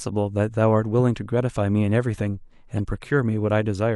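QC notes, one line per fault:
2.73–2.78 s, corrupt frame decoded: bit errors in a couple of compressed frames went undetected, so the decoder played them with wrong gains or misread codes. Energy lands at wrong frequencies for those frames, giving a short chirp, squeak, blip or burst of noise in the speech, peaking around -30 dBFS.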